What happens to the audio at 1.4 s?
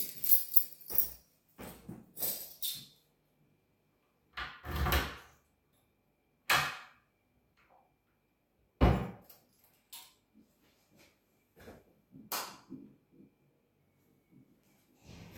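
From 0.91 to 2.64 s the sound plays back about 5.5% fast, raising its pitch by roughly 93 cents, almost a semitone, before snapping back. This is a drift correction step, likely from clock-matching software stepping its playback rate to rebalance a buffer. It is heard as a sudden detuning. On a spectrogram every partial jumps upward together across that span and drops back at its end. On a waveform the cycles there look slightly compressed in time.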